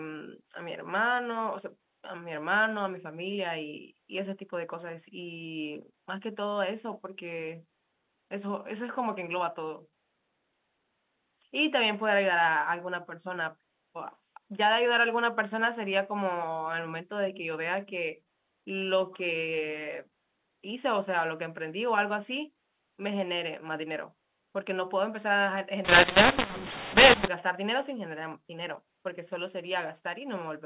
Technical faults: mu-law and A-law mixed up

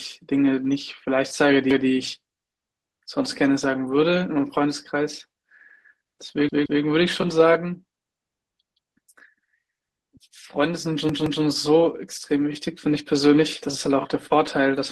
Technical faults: repeated buffer

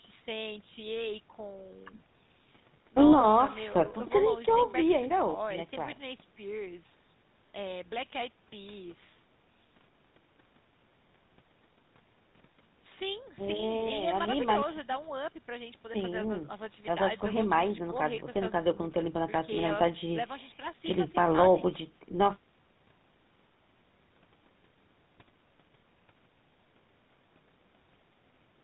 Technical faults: GSM full-rate codec

